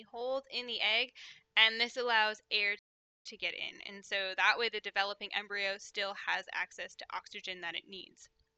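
At 2.79 s the sound cuts off mid-flow and stays silent until 3.26 s, a gap of about 463 ms. This is a playback stall, likely the player running out of data or its thread being blocked. Unlike a brief dropout, the silence lasts long enough to hear as a pause before the audio resumes.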